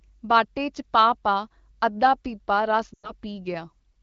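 Speech carried over an AMR wideband (HD Voice) link at 12.65 kbit/s shows a burst of lost AMR speech frames from 2.94 to 3.11 s. The decoder keeps repeating the last good pitch and vocal-tract parameters with falling gain, so the sound smears and fades quickly toward silence. The gap amounts to about 100 ms of missing audio, which fits a run of roughly five 20 ms frames. Speech then returns briefly weak and rough.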